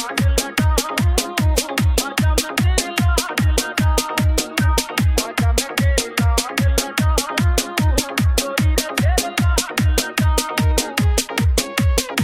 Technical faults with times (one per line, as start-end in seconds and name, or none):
none